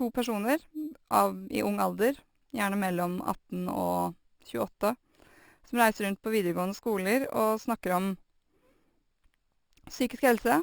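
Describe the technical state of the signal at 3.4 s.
At 3.4 s the speech carries a bright, metallic fizz at about 19 dB below the voice, rising and falling with it: imaging from sample-and-hold upsampling, present throughout. Each sample was simply repeated without a smoothing filter, which fits an original rate around 12 kHz, so a mirrored copy of the spectrum fills roughly 6 kHz to 12 kHz.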